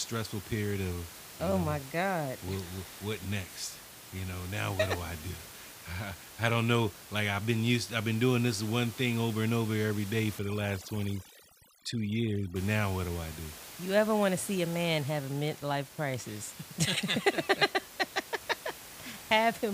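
From 10.39 to 12.56 s, overdone noise removal sets in: a suppressor set too aggressively zeroes bands close to its noise estimate, so the room noise, about 16 dB below the speech, drops and breaks up into twinkling specks. Unlike a noise gate, which silences everything at once, this removes individual frequency bands.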